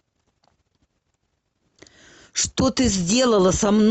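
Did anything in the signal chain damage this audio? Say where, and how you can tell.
No, nothing in the signal chain audibly damaged this speech, so there is no stage to point to.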